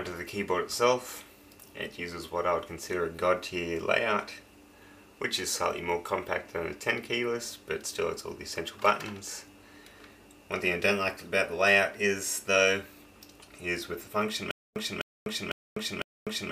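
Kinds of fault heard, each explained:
Stutter with silent gaps: from 14.51 s to the end, a 253 ms fragment repeats four times, each followed by about 249 ms of digital silence, a 502 ms cycle, likely from a stalled stream retrying. Waveform and spectrogram show identical blocks alternating with flat, empty columns.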